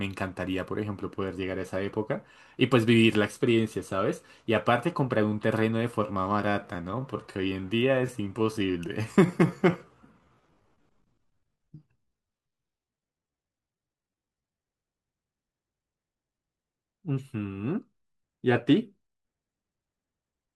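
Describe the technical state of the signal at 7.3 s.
At 7.3 s the audio sits inside a time-stretched section from 5.98 to 14.66 s, likely where software slowed the speech to about 0.74 times its speed by repeating short pieces to fill the length. The pace drags abruptly while pitch holds.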